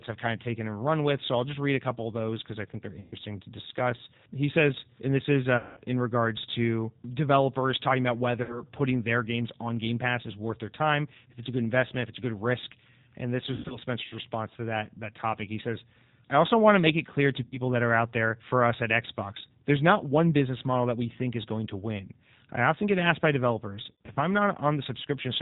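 G.729 codec damage runs through the whole 25-second speech clip: narrowband, rough, synthetic speech rebuilt from a coarse vocal-tract model at 8 kbit/s. VoIP packet loss concealed by the speech codec breaks in at 3.0–3.15 s (after "because I think they're"), 5.57–5.8 s, 8.43–8.62 s, 13.54–13.78 s, 17.44–17.6 s and 23.92–24.18 s, where the decoder stretches the last sound into a fading buzzy tone or coloured noise before the speech recovers.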